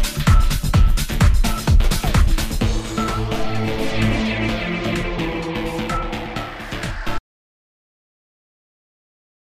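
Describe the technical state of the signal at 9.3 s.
At 9.3 s the signal is in an audio dropout to silence that begins abruptly at 7.19 s and runs to the end of the clip. The signal is silent with no room tone, most likely because the input was lost while recording continued writing empty samples.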